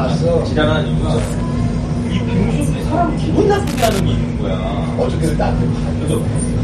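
Loose connector crackle appears twice, from 1.18 to 1.43 s and again from 3.67 to 3.99 s. A worn or dirty contact somewhere in the chain is making and breaking in quick succession, so the sound is chopped on and off at an irregular rate, and any DC present on the line turns each break into a pop. Both bursts come through as ragged scratching laid over the sound, roughly a quarter to a third of a second long.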